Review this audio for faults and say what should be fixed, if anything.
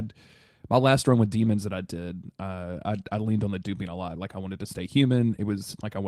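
No faults are audible, so nothing needs fixing.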